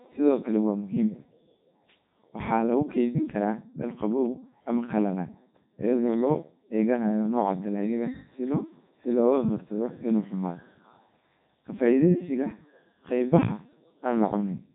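Speech run through the Codec 2 vocoder for the whole clip, rebuilt from sine waves so it's heavily robotic and buzzy, with nothing above 3.8 kHz; fits the 3.2 kbit/s mode.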